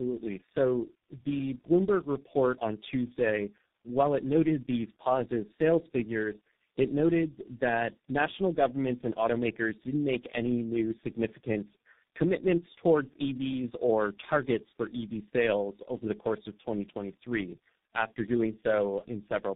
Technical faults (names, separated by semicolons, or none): tandem speech coding